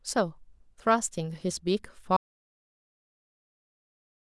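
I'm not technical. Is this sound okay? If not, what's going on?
No. At about 2.17 s the speech cuts to dead silence until the end, an audio dropout to silence, likely from the input disconnecting or getting muted.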